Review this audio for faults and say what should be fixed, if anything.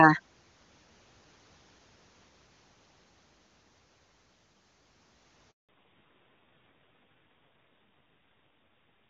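A handover gap opens at 5.51 s, when the call is passed from one network link to another and no speech frames reach the receiver while the switch completes. The sound fades out within a few tens of milliseconds and stays silent for about 180 ms, until 5.69 s, when the new link starts delivering audio. Whatever was spoken in that window is gone and cannot be recovered from the received stream.

A fallback to narrowband follows right after the handover, from 5.69 s to the end of the clip. The new link no longer carries the wideband codec, and the call is re-established on a narrowband one. Up to that point the HD Voice path sounds clean, with little or no audible coding damage. From 5.69 s onward nothing above 4 kHz survives, so the speech loses its brightness and sibilant detail and turns dull and somewhat rough. The raspy texture points to a low narrowband rate, consistent with AMR-NB around 5.9 kbit/s.

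To prevent both, configure the networks so that handovers keep HD Voice end to end and use make-before-break switching, which keeps the audio path unbroken and wideband.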